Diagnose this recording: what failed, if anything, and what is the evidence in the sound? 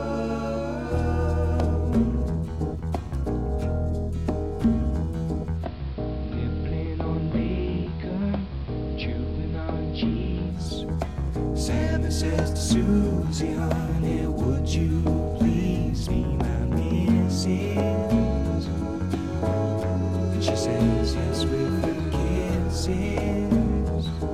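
At reception, digital radio blending to analogue: signal lost, 5.51–10.63 s, 178 ms crossfade to AM. Hiss roughly 25 dB down, waveform about 3 dB lower.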